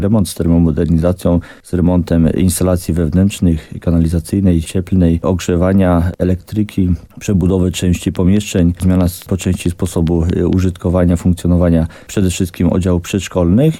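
From 8.16 to 10.54 s, a train of clicks: about ten evenly spaced pops at 4.6 per second ticking above the sound, likely from electrical interference.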